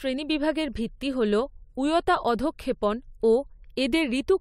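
Nothing goes wrong anywhere in this bit of speech, so there's no fault to point to at any moment.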